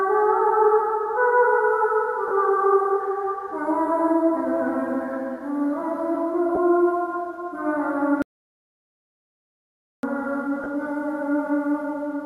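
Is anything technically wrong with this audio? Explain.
Yes. At 2.28 to 2.31 s, 6.55 to 6.57 s and 10.64 to 10.66 s, the sound briefly smears into noise. These are lost LE Audio frames: the LC3 decoder concealed each gap by repeating the last spectrum with random signs. The gaps last 30, 20 and 20 ms, which fits three or two 10 ms frames.

From 8.22 to 10.03 s the audio cuts to dead silence for about 1.8 s, with no background left. This is an audio dropout to silence, likely from the input being lost while zeros kept being recorded.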